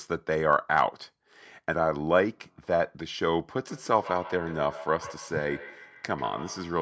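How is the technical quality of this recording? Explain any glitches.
The recording has one clear glitch: a feedback echo between two devices from 3.69 s to the end at 6.81 s. Two devices in the same room seem to be on the call, so one device's loudspeaker plays what the other's microphone sent and that microphone picks it up again. Each echo canceller removes only its own device's playback, so this loop gets through. The speech returns roughly every 150 ms as a thinner, ringing repeat, peaking at about 16 dB below the speech. The audio also reaches no higher than 8 kHz, consistent with the call's microphone processing.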